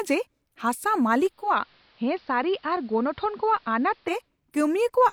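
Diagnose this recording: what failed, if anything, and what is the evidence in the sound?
The hybrid radio receiver lost its digital stream at 1.21 s and blended to the station's AM analogue broadcast until 4.32 s. Over a 0.39 s cross-fade the speech drops about 3 dB, loses its upper treble, and picks up faint hiss.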